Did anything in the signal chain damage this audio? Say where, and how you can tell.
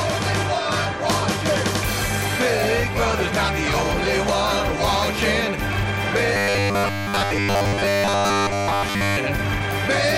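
Yes. From 6.34 to 9.17 s, the driver or buffer stage likely ran short of fresh audio and filled the gaps by repeating its last block. Most of the sound in that stretch is replayed material rather than new signal. This is robotic sound from repeated short buffers. The repeats lock a fixed buzz at 100 Hz onto the sound, which points to a 10 ms block recycling over and over. The result is a rigid, metallic tone that only loosely tracks the original.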